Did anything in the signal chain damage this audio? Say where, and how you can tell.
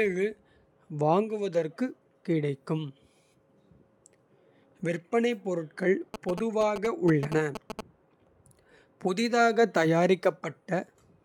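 Yes, in the analogue wiring. Just after "விற்பனை பொருட்கள்", from 6.14 to 7.81 s, there's a galloping dit-dit-dit of short 217 Hz buzzes, about 5 dB below the speech. Those are GSM signalling bursts: a nearby 2G phone's radio pulses, rectified by the audio circuitry.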